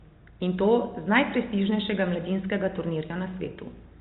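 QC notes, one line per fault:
No faults to log in the QC notes for this speech clip.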